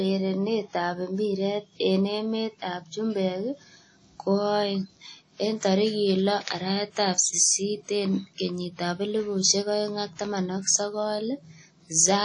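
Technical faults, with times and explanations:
Throughout, WMA compression. Nothing sounds above 10.1 kHz. A ringing, washy hiss breathes with the speech. This likely comes from a low-bitrate WMA encode, around 32 kbps.
6.44 to 6.47 s, pre-echo. A short hiss smears about 30 ms ahead of a sharp attack. Quantisation noise spread across the block fills the quiet moment first.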